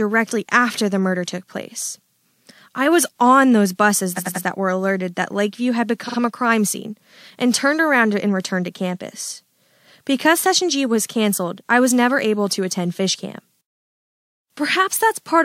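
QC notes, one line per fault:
4.16–4.44 s, repeated frames: right after "was on those buses" a 93 ms chunk plays three extra times before "that were alerted that", so the speech stutters and runs about 279 ms long. The block length fits a couple of compressed frames being written or sent again.
6.06–6.16 s, repeated frames: just before "a crime scene and" a 46 ms block repeats twice more, adding about 93 ms. This is likely a single frame duplicated.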